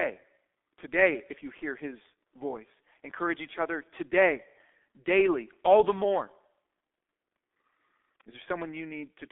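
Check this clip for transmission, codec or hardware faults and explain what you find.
The speech has one fault running the whole way through: it has gone through the G.723.1 codec, and fairly heavily. The codec chops the signal into 30 ms frames and rebuilds it from a coarse vocal model that updates slowly, and the thin, grainy result fits its 6.3 kbit/s mode. Nothing survives below about 250 Hz or above 3.5 kHz, so it sounds muffled and hoarse, with consonants smeared together rather than crisp.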